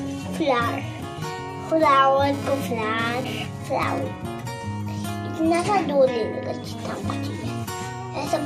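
From 1.69 to 3.99 s, GSM phone buzz appears. A nearby 2G phone sends radio bursts about 217 times a second during a data transfer. The audio circuit rectifies them. The result is a hard, raspy buzz with many harmonics, about 12 dB below the signal.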